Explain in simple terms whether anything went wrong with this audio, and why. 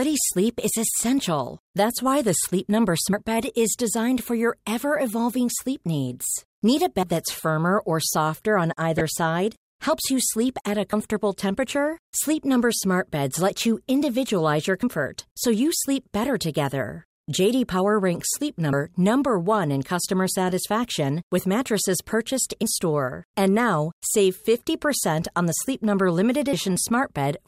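Three short skips are heard, at 3.13 s, 7.03 s and 18.73 s. Each jumps straight past about a tenth of a second of speech with no pause in between. The 4-second spacing between the first two suggests audio missing between chunks as the likely cause: the recorder handles sound in fixed blocks and drops a sliver each time it finishes one block and starts the next, then joins the two ends directly.

From 8.98 s to 9.01 s there is a brief disturbance over the speech. This is DAB burbling, the sound of a weak digital radio signal. A small number of transmission errors slipped past the receiver's error correction and corrupted the compressed audio, putting short blips of noise into narrow slices of the frequency range. The short duration suggests only a few damaged audio frames.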